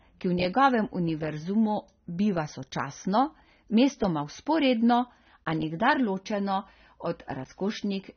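AAC compression damage runs through the whole clip: the speech is dull and smeared, with nothing above 6.3 kHz and a warbling, fizzy edge on sibilants. The likely cause is AAC-LC at a low bitrate, around 24 kbps, discarding high bands and coarsely quantising what remains.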